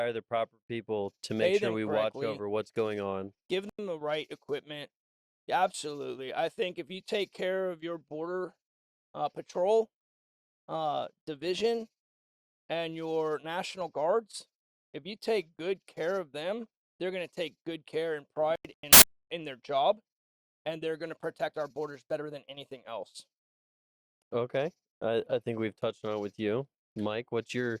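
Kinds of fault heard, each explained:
Corrupt frame muted: rejected damaged frames were replaced with silence, so sound cuts out abruptly, leaving clean gaps rather than noise, the longest from 18.56 to 19.02 s.
Corrupt FLAC frame: flipped bits sent the decoder's prediction astray, producing brief errors instead of silence at 11.60 s and 22.54 s, peaking about -33 and -59 dBFS.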